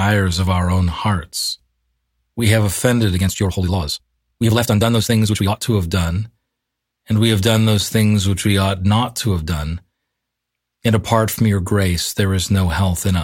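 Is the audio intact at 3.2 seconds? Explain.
No. From 3.12 to 5.60 s the speech runs rushed at unchanged pitch: a time-stretched section, likely sped up 1.97x by dropping short slices.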